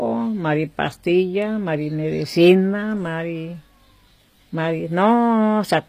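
Throughout, likely HE-AAC compression at a low bitrate rebuilds the treble from copied lower bands, so s sounds turn gritty and metallic, with nothing above 15.5 kHz.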